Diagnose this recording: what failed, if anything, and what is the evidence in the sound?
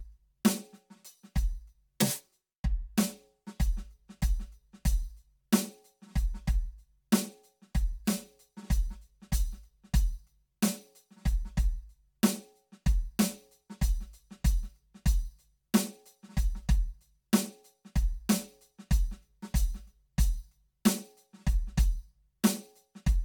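Channel delay (comb filtering) at the driver or buffer stage runs through the whole music clip. One channel trails by around 5 ms, so the mono sum cancels at evenly spaced frequencies from about 100 Hz upward. It sounds hollow, and the notches stay fixed, unlike a sweeping flanger.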